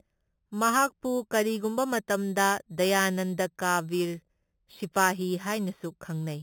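Across the whole speech recording runs imaging from sample-and-hold upsampling: the audio was raised from 8 kHz to 48 kHz by repeating samples unsmoothed, so mirrored copies fill 4 to 8 kHz at about -13 dB. Unlike steady hiss, this metallic fizz tracks the speech's level and moves opposite to its pitch.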